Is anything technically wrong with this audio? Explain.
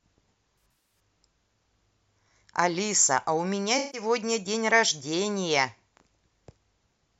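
Yes. The speech has two smeared, noisy, phasey patches, from about 0.63 to 1.00 s and again from 3.78 to 4.01 s. This is AAC frame loss with concealment. In the first patch, roughly 235 ms of audio went missing in short gaps, the longest around 70 ms. The second lost about 150 ms. Each time the decoder rebuilt the gap from the last good spectrum, which causes the blurred texture.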